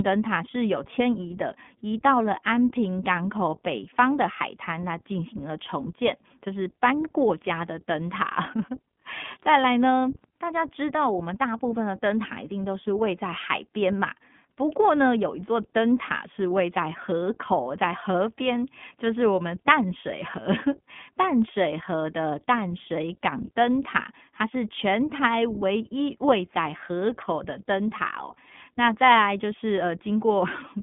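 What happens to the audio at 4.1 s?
At 4.1 s the speech is passing through the iLBC codec, as it does for the whole clip. The line is cut to roughly 150 Hz to 3.5 kHz, and each 20 ms frame is coded on its own, leaving a plainly rough, synthetic texture. A plain band-limit would stay smooth, without that graininess.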